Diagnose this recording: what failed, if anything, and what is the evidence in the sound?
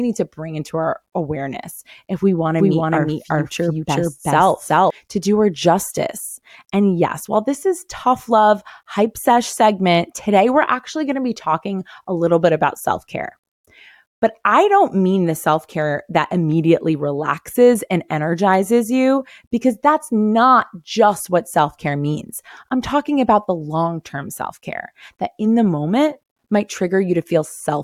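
A doubled audio track appears from 2.58 to 4.90 s: a second, full-band copy of the speech runs roughly 0.4 s behind at about the same level, with no decay or room colour, switching in and out abruptly. Likely cause: a duplicate capture path or misaligned edit.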